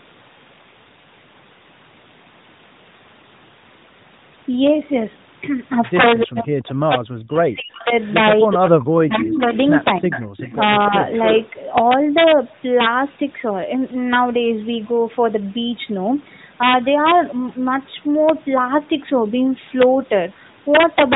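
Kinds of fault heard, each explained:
Integer overflow: Loud peaks in this speech exceed the integer ceiling and wrap to the opposite sign instead of being limited, so each one flips across the full range. With the level pushed about 8 dB past the limit, only a small fraction of samples are affected, well under one percent, but they turn up throughout the clip as sharp, violent cracks on the loudest syllables, harsher and more abrupt than ordinary clipping would sound.
Speech suppressed in double talk: During overlapping talk the near voice drops sharply, most likely because the echo canceller cannot tell it from loudspeaker echo and attenuates both. It happens three times: 6.23 to 7.92 s, with dips as deep as about 40 dB over roughly one and a half seconds; 8.45 to 9.54 s, about 35 dB at worst; and briefly at 9.99 to 10.26 s, a shallower dip of about 10 dB. The voice fades or cuts out in pieces.
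Echo leak: A delayed copy of the voice returns about 0.3 s behind the original, likely from a loudspeaker path the echo canceller failed to remove fully. It is faint at 7.76 to 8.14 s, about 30 dB down, then prominent at 9.29 to 9.77 s, only about 5 dB below the speech, and it persists from 10.11 to 11.5 s at about 10 dB down. The echo sits on top of the band-limited narrowband audio.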